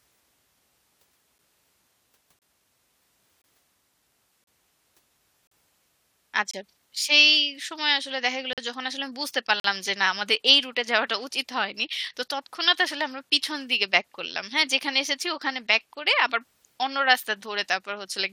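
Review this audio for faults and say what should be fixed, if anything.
Gaps between stream segments cut hard-edged silent holes, 8 to 45 ms long, at 1.38, 2.39, 3.42, 4.44, 5.47, 6.51, 8.53 and 9.60 s, roughly once per one-second segment, because the segment timestamps don't quite meet. Fix the segmenter so each segment's timestamps line up exactly with the end of the previous one.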